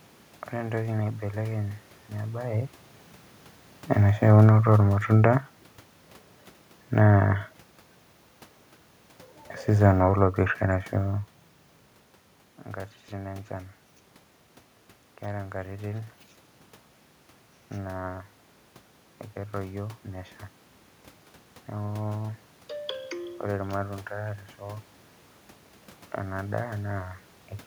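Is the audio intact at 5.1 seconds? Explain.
No. Clock slip clicks run from 0.17 to 27.59 s as faint ticks about every third of a second, likely single samples dropped or repeated because two unsynchronised clocks differ by roughly 70 ppm. Automatic gain falling also spans 4.28 to 7.48 s: the gain control judged the input too loud or its background noise too strong and eased it down by about 4 dB, so the sound and its background sink together.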